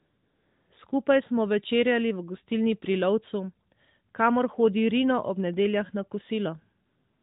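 From the start to 0.7 s, and again from 6.86 s to the end at 7.22 s, the sound drops into AMR comfort noise. The phone's voice activity detector judged these stretches silent and sent no speech frames, so the receiver generated a steady, smooth hiss from a coarse level-and-spectrum description instead of the real background. It switches in and out at the boundaries, and the narrowband AMR path around it carries light codec colouring.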